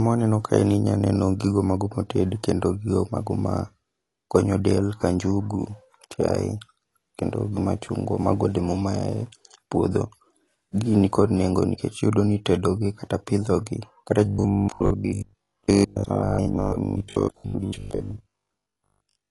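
Speech that sounds dull and smeared throughout, with plainly audible warble, likely from AAC compression at a low bitrate around 32 kbps. From 14.26 s to 19.30 s it turns into a rigid metallic buzz at 50 Hz, most likely robotic sound from repeated short buffers: a 20 ms slice is replayed while most of the real audio is skipped.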